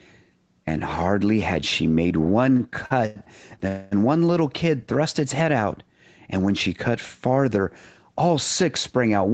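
Speech, carried over a call path whose codec band-limits it to about 8 kHz, shows a short stall from a late packet three times in quick succession: at 2.57 to 2.62 s (24 ms held), 2.86 to 2.92 s (45 ms) and 3.06 to 3.18 s (94 ms). Each time the receive buffer ran dry, and the last sound was stretched until the packet arrived. Nothing is lost, but each sound is held too long, with a slight buzz or dip. Just after, from 3.68 to 3.93 s, comes a call audio freeze lasting about 238 ms, likely caused by packets held up in transit, which emptied the jitter buffer for longer. The receiver filled the wait with a fading continuation of the last sound rather than silence, then resumed exactly where it had stopped, so a gap is inserted and the rest of the audio arrives that much later.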